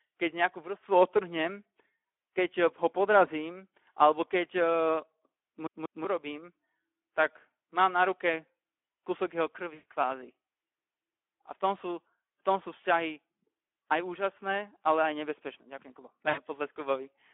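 The Speex codec runs throughout, probably around 11 kbps: the speech sounds hoarse and grainy, squeezed into a phone-like band of roughly 250 Hz to 3.4 kHz. From 5.67 to 6.05 s a CD stuck on one turn replays the same 0.19 s fragment twice, with tiny mutes at each jump, the classic skipping-disc stutter. At 9.73 to 9.84 s and again at 16.29 to 16.41 s, VoIP packet loss concealed by the speech codec smears the voice into a fading buzzy tone or coloured noise, with weak or distorted speech lingering just afterwards.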